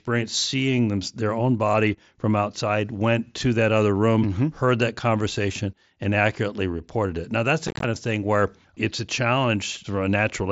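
From 7.68 to 7.84 s, just after "reported it now that's", unconcealed Bluetooth headset packet loss drops about 105 ms of audio in short gaps, leaving the speech chopped and crackly.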